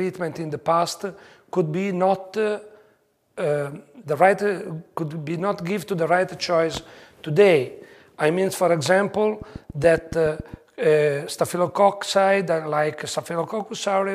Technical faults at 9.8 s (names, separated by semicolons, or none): train of clicks